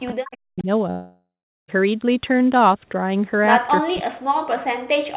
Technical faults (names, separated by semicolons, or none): speech suppressed in double talk; echo leak; long network dropout